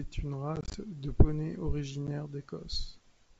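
Speech carried over wideband G.722, showing packet loss on an ADPCM call. From 0.56 to 0.76 s, just before "de poney", short silent gaps totalling 90 ms, none over 20 ms, are scattered across 180 ms. A single 10 ms hole follows at 2.07–2.09 s after "de poney", each time followed by slightly distorted speech while the decoder's adaptive state resynchronises.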